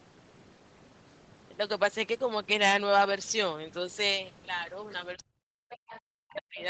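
From 5.15 to 6.6 s the talker's speech sinks and breaks up, falling by as much as about 40 dB across roughly a second and a half. This is likely speech suppressed in double talk: with both sides speaking, the echo canceller treated the talker as echo and turned everything down.

Within that stretch, a faint second voice emerges from 5.7 to 6.0 s at about 20 dB below the speech, and again briefly at 6.3 to 6.35 s, about 25 dB down. This is likely the other side's voice leaking through, where loudspeaker playback reached the microphone and the canceller did not fully remove it.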